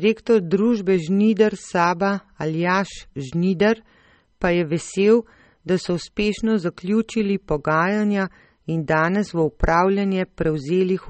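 Throughout the speech, the treble stops dead at about 8.4 kHz, and what remains has a watery, swirling quality, with sibilants turning metallic and chirpy and consonant onsets smeared. This is plainly audible damage of the kind that likely comes from MP3 compression at a low bitrate, on the order of 32 kbps. Starved of bits, the encoder discards the highest band and lets weak frequency lines flicker on and off between frames. That flickering is what separates it from a simple low-pass filter, which would dull the sound without any swirl.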